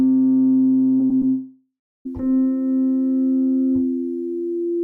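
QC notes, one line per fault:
0.97–1.23 s, short concealed packet loss: three gaps of 20, 40 and 40 ms at 0.97, 1.06 and 1.18 s, each bridged by extending the preceding sound and blending back, heard as brief smears or wobbles.
1.29–2.07 s, long network dropout: about 0.76 s of audio missing, likely from a stalled connection; the last sound continues as a fading buzz or hiss, then roughly 0.28 s of near silence before the audio resumes further on.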